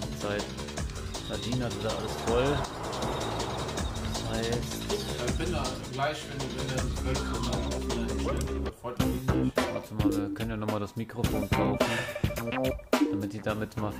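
Nothing stood out on listening to the audio.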